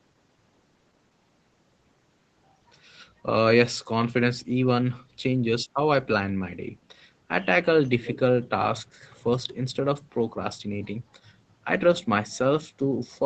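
A speech recording in which one side's echo canceller has likely let part of its loudspeaker pickup back into the call. This echo leak is heard from 8.02 to 8.19 s as a faint copy of the speech arriving about 305 ms late, well below the main voice.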